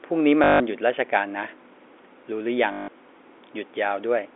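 Packet loss with the last packet repeated hits this telephone-band speech at 0.44 to 0.60 s and again at 2.72 to 2.88 s. Each 160 ms gap is filled by replaying one stored packet, giving a buzzy robotic stutter consistent with eight lost 20 ms packets.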